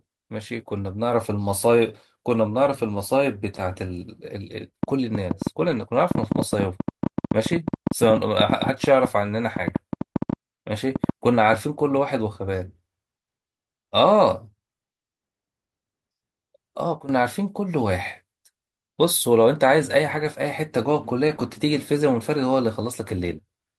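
A train of clicks runs through this speech recording from 4.83 to 11.55 s: about 50 similar pulses at roughly eight per second, spaced unevenly, and rising well above the speech level so they tick through the pauses as well as over the talking. The steady repetition of the same sharp pulse over several seconds points most likely to interference from nearby equipment or a faulty connection or power supply. A lost packet rebuilt from error correction is audible at 5.67–5.81 s, 20.11–20.25 s and 21.27–21.41 s. Each time, about 80 ms of sound, which fits four 20 ms packets, comes from the low-bitrate backup copy carried in the following packet, so nothing drops out, but those stretches turn briefly rougher and noisier. A sudden gain jump at 17.00–17.09 s drops the level by about 12 dB in a single step, with the speech and the background noise falling together rather than fading, likely the signature of a digital gain setting applied without a ramp.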